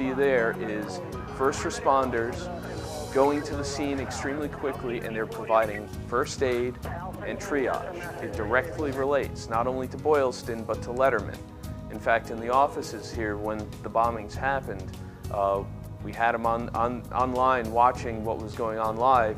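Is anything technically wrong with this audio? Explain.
No, nothing technically wrong stood out on listening to this audio.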